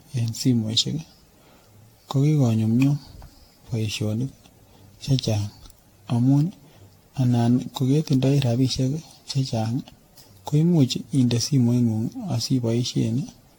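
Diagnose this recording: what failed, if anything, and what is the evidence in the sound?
Swirly, hollow, smeared speech with blurred attacks throughout and nothing above 19.1 kHz points to codec-stage generation loss, likely from about fifteen AAC-LC re-encodes near 96 kbit/s.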